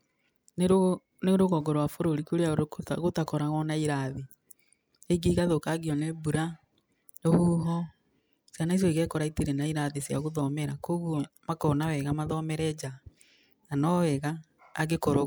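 No technical faults can be heard anywhere in the speech. There is nothing in the audio that calls for comment from a technical standpoint.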